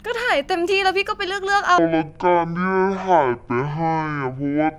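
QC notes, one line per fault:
1.78 s to the end of the clip, section at the wrong speed: the speech abruptly turns deep, slow and drawn out, dropping to around ten semitones lower and staying there to the finish. The timing stretches too, with everything taking twice as long, because this stretch plays back at half speed. Slowing the playback lowers the pitch at the same time, as happens when a section is likely run against the wrong clock during editing or playback.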